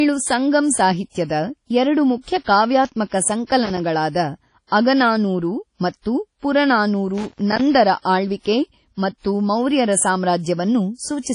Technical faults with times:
0.00-11.35 WMA compression
3.65-3.80 loose connector crackle
7.18-7.61 loose connector crackle

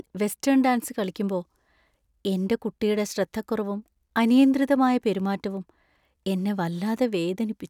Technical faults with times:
none

